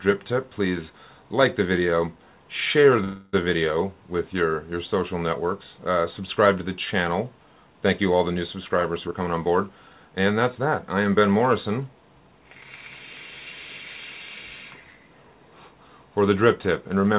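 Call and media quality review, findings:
Call audio freeze, 3.04–3.36 s: sound held as a fading buzz or hiss for about 0.29 s, no silence, then resumes where it stopped with nothing lost. This is likely a jitter buffer underrun from delayed packets, not packet loss.

Jitter buffer speed-up, 9.06–11.29 s: hurried passage at 111% speed, pitch unchanged. The receiver drained excess buffered delay by cutting pitch-period pieces, roughly 0.3 s in total. The steady pitch rules out a resampling or clock-rate error. The band stops at 4 kHz, consistent with a 64 kbps G.711 mu-law path.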